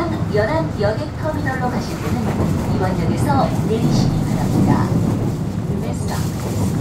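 No technical faults are audible.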